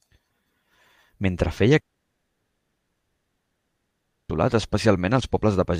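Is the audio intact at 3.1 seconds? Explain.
No. At 3.1 seconds there is only silence. From 1.79 to 4.31 s the speech drops out: a brief fading tail gives way to nearly 2.5 s of nothing, then the speech resumes past the lost section. This is likely a long network dropout, where no audio reached the receiver.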